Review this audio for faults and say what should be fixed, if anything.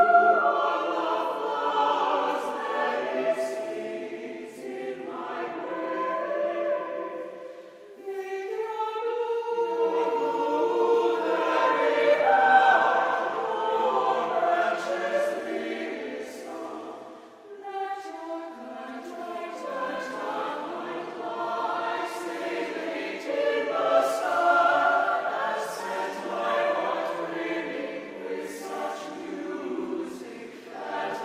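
Nothing here needs fixing, since no faults turn up anywhere in the recording.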